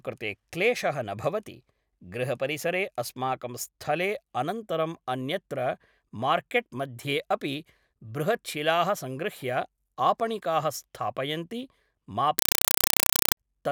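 A compressed stream played as audio cuts in at 12.39 s and runs to 13.37 s, replacing the speech with very loud, chattering static. The digital link is carrying an undecoded AC-3 (Dolby Digital) stream, and the receiving end treats the coded data as ordinary samples. Each frame comes out as a 4 ms burst of noise followed by silence, repeating 31.25 times a second. The density of the bursts fits a 192 kbps stream.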